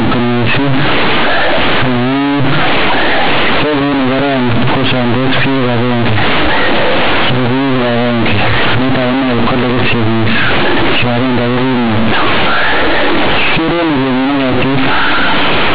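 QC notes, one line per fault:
Throughout: companded audio read as linear. Mu-law bytes play as 8-bit samples without expansion, so each sign change swings across about half the range and quiet speech matches loud, giving harsh buzz and noisy pauses. Waveform: blocky, bent out of shape. Spectrogram: dense noise to 4 kHz.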